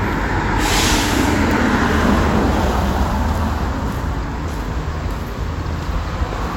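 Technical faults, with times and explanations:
Nothing here to flag; the recording comes across without any technical faults.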